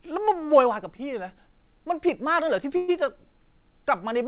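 At 0.96 to 1.02 s there is a short stall from a late packet. The jitter buffer ran dry, so about 27 ms of sound is held and stretched. The audio then resumes with nothing lost.

At 2.76 to 2.91 s the sound holds on and fades for about 120 ms. This is a call audio freeze, likely from packets delayed in transit. It then picks up where it stopped. Above 4 kHz the band is empty, which fits a narrowband call codec.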